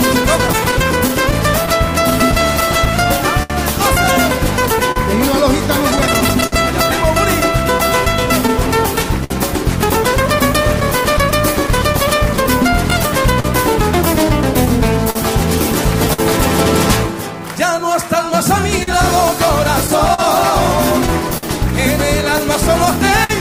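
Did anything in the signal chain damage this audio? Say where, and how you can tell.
Yes. Clock drift between sender and receiver sits at the network and jitter-buffer stage throughout the clip. The sender's clock runs roughly 4 percent slow, so the buffer keeps rebalancing, and small timing hiccups recur at uneven intervals. Unlike packet loss, this comes from a steady rate mismatch, not random missing data.

Scattered short gaps, a network packet-loss fault, occur in six stretches: 0.47–3.52 s, 4.92–6.54 s, 7.78–9.32 s, 10.80–13.46 s, 14.65–16.20 s and 18.53–21.45 s. Each hole is patched by extending the last sound, the longest running about 70 ms. The isolated, randomly placed smears set these apart from drift corrections.

Repeated timing corrections run from 8.53 to 18.23 s. The receiver stretches playback to about 99 percent speed, adding under a tenth of a second in total, in small edits all in one direction and unevenly spaced. 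These are small edits rather than the distinct dropouts of lost packets.

Repeated stalls (stutter) appear from 22.65 to 23.31 s. The jitter buffer ran empty three times, and the receiver filled 67 ms in total by continuing the last sound, the longest wait 55 ms. Nothing is lost, so the audio drags and stutters instead of skipping.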